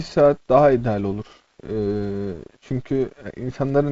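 Speech over G.722 wideband coding, with no faults heard.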